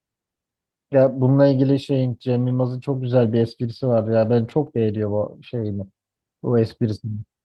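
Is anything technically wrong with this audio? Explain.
Yes, there are two faults. Between 3.81 and 5.00 s there are scattered short gaps: about seven packets went missing or arrived late, and the receiver filled each hole, none longer than about 20 ms, by extending the preceding sound. The speech stays clear but picks up brief ticks and small smears.

From 5.55 to 6.03 s there is a jitter buffer slow-down: with its reserve running short, the receiver repeated individual pitch periods to add 66 ms. That stretch plays at 88% speed with unchanged pitch, so the speech sounds drawn out.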